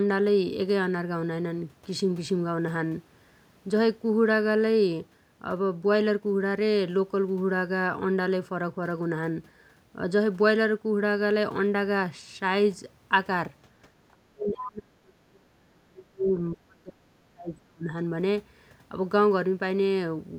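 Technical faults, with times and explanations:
14.12–16.37 s and 16.53–17.91 s, speech suppressed in double talk: the speech sinks by as much as around 35 dB in choppy patches, losing its upper frequencies or breaking into fragments, recovering briefly near 16.4 s. The likely cause is an echo canceller that, with both sides talking at once, could not separate the near talker from loudspeaker echo and attenuated everything. On a spectrogram the energy thins out, leaving near-blank gaps. The waveform shows a sharply shrunken, stuttering envelope.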